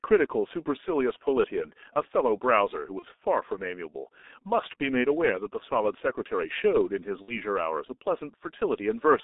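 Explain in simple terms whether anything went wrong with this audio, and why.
Yes, two things went wrong. The whole clip went through the G.723.1 codec, an old internet-phone codec that squeezes speech hard. It keeps only about 250 Hz to 3.7 kHz, so the speech sounds muffled and hoarse, with smeared consonants.

There's also VoIP packet loss concealed by the speech codec, at 2.99–3.04 s and again at 7.22–7.42 s. Chunks of audio went missing, and the decoder papered over the gaps by stretching what came before into a buzzy or noisy, fading sound, with the speech staying weak just afterwards.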